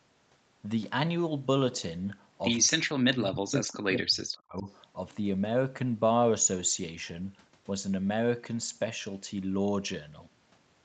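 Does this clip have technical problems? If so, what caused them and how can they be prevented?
Yes. From 2.65 to 4.67 s the speech sinks sharply, at its deepest about 40 dB down, for roughly two seconds. This is speech suppressed in double talk, likely caused by both sides talking at once: the echo canceller couldn't tell this talker apart from its loudspeaker echo and attenuated everything. Using headsets on both ends, or a canceller with better double-talk detection, prevents it.

From 4.59 to 4.73 s a faint, brief scrap of delayed sound appears, trailing the original by 228 ms and sitting around 35 dB below the speech. This is an echo leak, likely from the far side playing the call over a loudspeaker while its echo canceller failed to remove all of the pickup. The residue was then transmitted back. Headphones on the far end, or a better-converged echo canceller there, would stop it.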